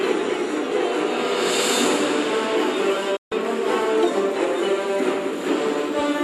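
At 3.16 s the sound drops out for about 0.16 s, a digital broadcast dropout: the receiver stopped getting valid frames, muted with a fade of about 8 ms, and resumed at 3.32 s. Roughly 144 ms of programme, which fits six lost frames, is simply missing rather than concealed.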